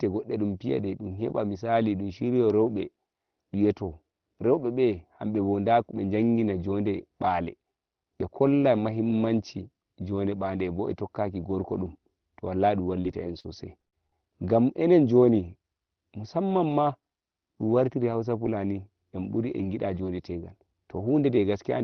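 Speech over a call path whose band ends near 6 kHz, which fits a 24 kbps Opus link, shows repeated packet loss (robotic sound) from 13.01 to 14.12 s, between "dum to wallahi dum" and "ngam enen". Seven short gaps, the longest 60 ms and together about 180 ms, are filled by stretching the preceding sound. This gives a choppy run of patches rather than the single clean silence of one dropout.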